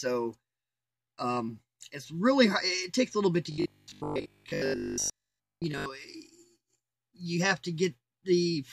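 From 3.52 s to 5.86 s the sound turns into a rigid, metallic buzz pitched at 50 Hz. Its shape still loosely follows the underlying audio, but the natural detail is gone. This is robotic sound from repeated short buffers, likely caused by new audio arriving too seldom, so the playback filled the gaps by looping the last fragment. A 50 Hz buzz fits a repeated chunk of about 20 ms, and most of the material in this stretch is repetition rather than real audio.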